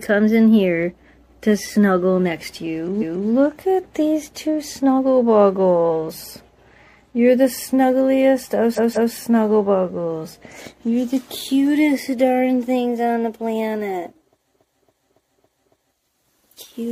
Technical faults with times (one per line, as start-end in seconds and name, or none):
2.98-3.25 repeated frames
8.73-9.12 repeated frames
14.49-15.89 repeated frames